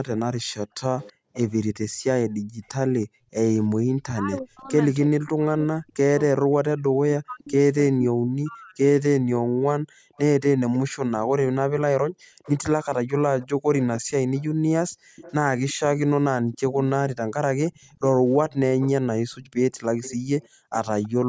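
A speech recording from a call shows three echo-canceller problems. An echo leak appears from 0.38 to 4.4 s and again from 7.45 to 21.08 s. A second copy of the voice trails the original by 326 ms, sitting roughly 20 dB below it. The likely cause is that the far end plays the call over a loudspeaker and its echo canceller does not fully cancel what its microphone picks up, so the leftover returns down the line. The background gated by the echo canceller shows between 0.66 and 3.77 s and between 9.2 and 20.71 s. The room tone dips and drops out, falling by as much as about 40 dB, for around a second in the first span and around three seconds in the second. The canceller is clamping the microphone hard while the loudspeaker is active and releasing it once playback stops, so the ambience pumps in and out instead of staying steady. Speech suppressed in double talk occurs from 4.05 to 8.81 s. 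While both parties speak together, the loudspeaker-side talker's voice dips and cuts out in fragments, with the deepest drops around 40 dB and roughly three seconds affected overall. This is most likely the canceller failing to separate local speech from loudspeaker echo and attenuating both. The band ends at 8 kHz, consistent with a 16 kHz call path.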